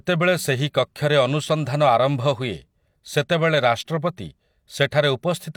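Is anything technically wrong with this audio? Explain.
No, nothing in this speech recording points to a technical fault.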